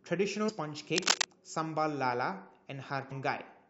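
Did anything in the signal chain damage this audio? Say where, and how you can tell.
Yes. At the codec stage, smeared blips at 0.48 to 0.50 s and 3.10 s show compressed frames skipped, about seven 23.2 ms frames, roughly 150 ms lost each time.

In the analogue wiring, a rustling scratch from 0.96 to 1.25 s, a few dB above the speech, is cable scratch noise, likely a worn cable or connector being moved.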